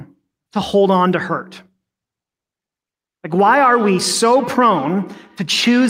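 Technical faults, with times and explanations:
3.37 s to 5.9 s, feedback echo between two devices: the speech gains a trailing copy of itself that comes back at a steady spacing of roughly 150 ms, thinner and more ringing than the original, peaking at about 14 dB below the speech. This points to a second device in the same room playing this microphone's signal back into it. Each device's echo canceller removes only its own playback, so the returned sound goes round the loop again.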